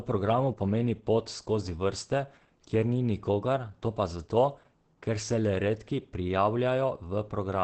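A speech recording with heavy Opus compression damage from start to finish. The sound is muffled and hoarse. Nothing is present above 8.6 kHz, so the top of the spectrum is simply missing. This narrowed, wideband-limited sound points to the encoder's speech mode, SILK, rather than its music mode. It is likely a very low bitrate, which fits roughly 12 kbps. Fine detail is thinned out.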